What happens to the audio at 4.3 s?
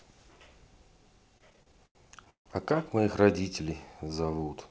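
At 4.3 s the speech is inside a jitter buffer slow-down running from 4.04 to 4.45 s. The receiver's buffer ran short, so it repeated single pitch periods to rebuild its reserve, adding about 89 ms and playing that stretch at roughly 81% speed. The sound drags at the same pitch and may warble slightly. On a spectrogram the harmonics keep their spacing but stretch in time. The waveform shows runs of near-identical cycles.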